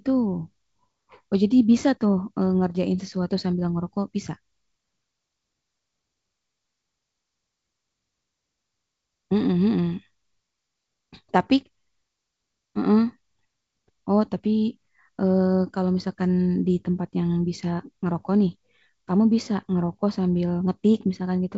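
Nothing stood out on listening to this speech, which comes through wideband G.722 telephone coding at 64 kbit/s.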